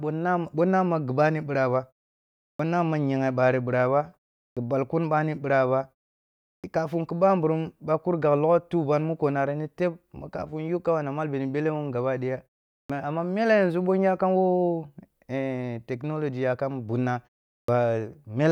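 The output device drops into a low-power state during each pause in this speech and needs about 55 to 65 ms to wake again, producing a clipped start after a pause at 2.54, 4.51, 6.58, 12.83 and 17.62 s. Each follows a pause of 0.4 to 0.7 s, and the opening sounds of the next word are swallowed, so speech snaps in abruptly from silence, missing its onset.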